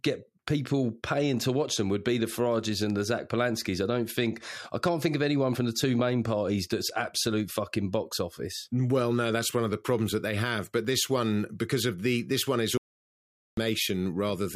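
An audio dropout to silence runs from 12.77 s to 13.57 s, removing 0.8 s of sound. The signal stops abruptly and comes back just as abruptly, with the gap holding silence: no room tone, no noise floor, nothing. That points to the input path being lost while recording continued, most likely through a brief disconnection, a failed link or an accidental mute, so silence was written in place of the missing audio.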